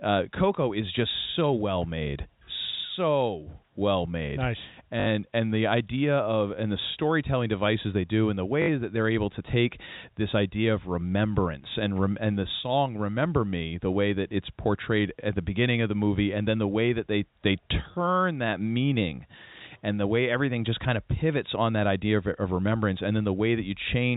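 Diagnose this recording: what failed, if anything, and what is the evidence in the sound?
Network packet loss with last packet repeated: the receiver replayed stale audio for 60 ms at 5.0 s and 8.62 s, causing brief robotic stutters.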